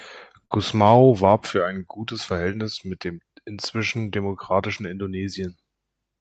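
A burst of packet loss at 0.45 to 0.53 s: a run of packets arrived too late or not at all. The receiver extended the last sound for about 51 ms, fading it into a brief held tail, then resumed with about 60 ms of speech missing.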